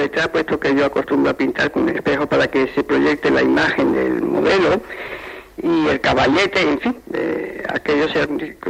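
Listening closely from beginning to end, nothing in the recording stood out as a technical problem.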